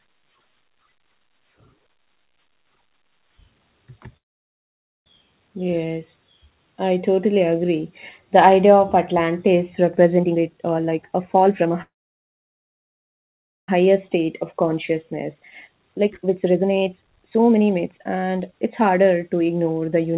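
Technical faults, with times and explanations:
4.17–5.07 s, call audio freeze: a brief tail of sound gives way to about 0.87 s of silence before resuming intact, likely because delayed packets emptied the jitter buffer.
10.17–11.71 s, jitter buffer speed-up: the audio rushes at 150% speed without any pitch rise, as the receiver trims roughly 0.7 s of pitch-period slices to reduce excess buffering.
11.82–13.69 s, call audio freeze: a short fading continuation is followed by about 1.79 s of dead air. The audio then picks up where it stopped, and the delay grows by 1.86 s.
13.87–20.14 s, jitter buffer speed-up: the sound stays hurried at 131% speed to the end. Repeated pitch-period cuts remove about 2 s, working off excess buffered audio.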